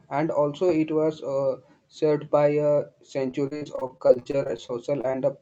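From 3.31 s to 5.15 s the speech turns choppy and robotic: repeated packet loss leaves nearly twenty short holes, the longest about 41 ms, each patched by stretching the previous sound. About a fifth of that span is filled this way. The robotic patching distinguishes it from plain dropouts, which would be silent gaps.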